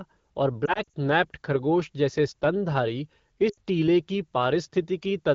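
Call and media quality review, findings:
Lost AMR speech frames at 0.66–0.93 s, ending before "नैप्ड खरगोश जैसे स्तनधारी": scattered dips and warbles, likely radio errors with the decoder replaying the last good frames at falling gain. At 3.49–3.57 s, before "टीले की": an 80 ms gap dropping to near silence.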